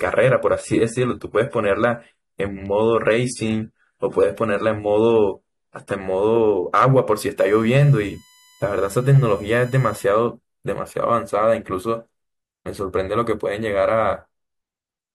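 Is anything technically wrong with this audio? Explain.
Yes, there are two faults in this speech clip.

From 0.0 to 6.0 s the audio shows an adaptive stream starting at a low bitrate. The player began on a lean version of the stream to get playback going quickly, then switched up once it had gauged the connection. Before 6.0 s the top end is dull and thin and coding artefacts are prominent, which fits AAC at around 32 kbit/s. At 6.0 s the quality jumps abruptly, with no gap, to something consistent with about 96 kbit/s.

From 7.39 to 10.04 s there is USB whine. The USB bus pulls current in 1 ms frames, and that periodic load leaks into the audio path through shared power or ground. The result is a steady, fixed-pitch tone built on 1 kHz, with its strongest component at the 7 kHz harmonic. It sits roughly 30 dB below the speech, as a thin, high whine under the voice.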